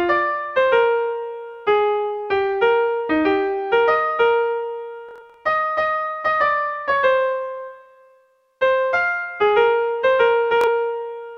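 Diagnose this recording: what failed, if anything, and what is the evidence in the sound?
Bluetooth stutter, wireless link, 5.09–5.37 s and 10.61–10.67 s: lost packets replaced by replayed slices, seen as repeating identical waveform blocks and striped spectrogram columns.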